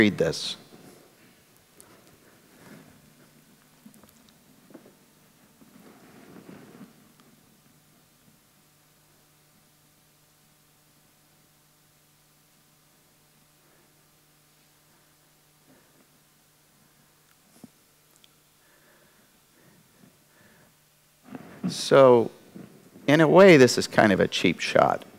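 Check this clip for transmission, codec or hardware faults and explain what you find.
There is one fault, hard clipping, near the end of the clip in two places.

From 23.13 to 24.06 s the loud parts take on a harsh, gritty fuzz, and at 24.79 to 24.82 s a brief crackle catches the peaks. The signal was driven past what a stage in the chain could pass, by about 4 dB in the first stretch and about 1 dB in the second, so the peaks were cut flat. Those squared-off tops add harmonics high up the spectrum.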